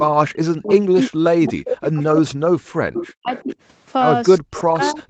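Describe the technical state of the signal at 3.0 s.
Speech suppressed in double talk covers 3.0 s, within a span from 0.29 to 3.56 s. The speech dips and breaks up, at its deepest falling around 40 dB, likely because the echo canceller, facing both sides at once, turned down its own talker along with the loudspeaker echo.

An echo leak also sits exactly here, from 2.95 to 3.08 s: a brief delayed copy of the speech, 369 ms late and roughly 10 dB below it, likely because loudspeaker pickup slipped past the far end's echo canceller.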